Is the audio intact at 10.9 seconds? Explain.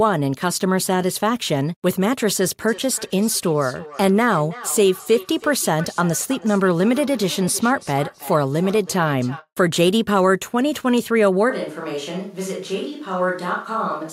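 Yes, the audio is intact at 10.9 seconds, with no dropout, click, distortion or other technical fault at that point.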